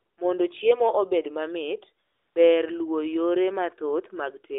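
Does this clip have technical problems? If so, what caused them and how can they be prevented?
Yes. AMR comfort noise at 0.00–0.18 s and 2.06–2.36 s: no speech frames were sent, so the receiver substituted smooth synthetic noise for the real background. To prevent it, turn off discontinuous transmission on the call path, or record locally rather than through the mobile link.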